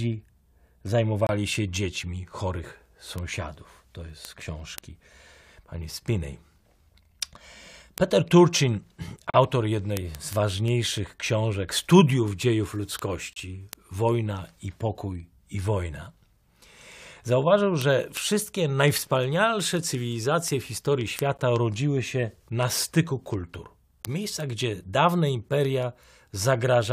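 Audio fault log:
0.14 to 26.89 s, word clock ticks: single-sample clicks recur about five times a second, roughly 150 in all, sharp and uneven in strength. The receiving device is running on its own clock rather than locking to the sender's digital link. The two drift apart by something around 150 ppm, and each time they slip past each other one sample is dropped or repeated. That slip breaks the waveform, producing a tick at that steady rate.
1.27 to 1.29 s, 9.30 to 9.34 s, 13.33 to 13.36 s and 21.37 s, gap between stream segments: four hard-edged silent holes cut into the speech, lasting 25, 37, 30 and 16 ms. They fall on boundaries of 4-second segments whose time stamps don't meet, so the player pads the missing interval with silence. Nothing is lost from the audio itself, but the abrupt dropout and restart sound like brief stutters.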